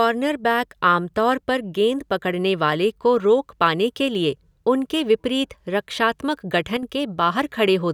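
Near the end of the speech, from 6.77 to 6.83 s, the level abruptly sags by about 6 dB for roughly 60 ms and then snaps back, a brief dip rather than a fade. The likely cause is one channel dropping out: with one side of the stereo pair momentarily lost, the mono sum carries only half of what both channels shared, so the common content falls by that amount until the missing channel returns.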